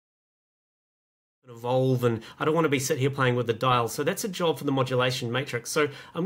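No technical faults are audible.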